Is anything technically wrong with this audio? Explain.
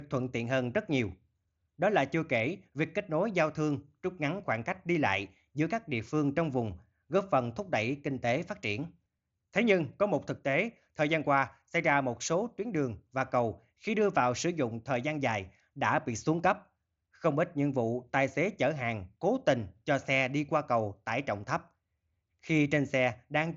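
No, nothing is technically wrong with this audio.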